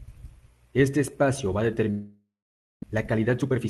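Speech whose sound at 1.90 s smears into a fading buzz or hiss, then goes silent for about half a second until 2.84 s, resuming with roughly half a second lost: a long network dropout is the likely cause. From 2.86 to 3.66 s the speech sounds hurried at unchanged pitch, about 122% speed, as the jitter buffer speed-up trims roughly a fifth of a second of built-up delay. The Opus call path also applies a 12 kHz band limit.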